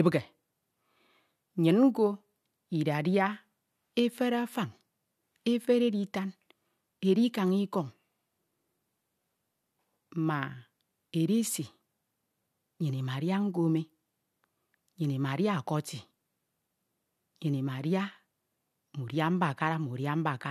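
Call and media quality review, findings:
Nothing to flag on this one; the speech comes across steady and intact all the way through, with no dropouts, glitches or level jumps worth opening a ticket over.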